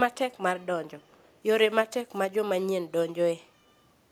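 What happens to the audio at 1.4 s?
An echo leak ends just there, running from 1.02 to 1.39 s: the far side likely played the call on a loudspeaker, and its echo canceller let some of that pickup return. You hear a faint copy of the speech trailing about 0.39 s behind, far below the direct sound.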